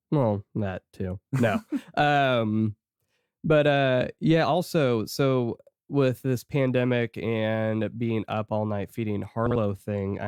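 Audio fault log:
9.46–9.56 s, frames out of order: after "up all night feeding", a garbled flutter; two adjacent 46 ms blocks play swapped.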